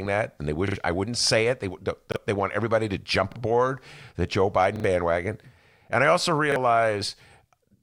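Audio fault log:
0.68 to 6.56 s, repeated buffer, five times: 0.68 to 0.76, 2.12 to 2.16 (just before "they want everybody to"), 3.32 to 3.36 (after "want everybody to jump"), 4.76 to 4.84, and 6.52 to 6.56 s (after "and I also"). New audio missed its deadline, so the device replayed its last 40 ms block, which fits a 40 ms buffer. The block repeats twice at 0.68 and 4.76 s and once at the other times. Each repeat leaves a short stutter with hard joins and skips around 70 ms or 40 ms of speech.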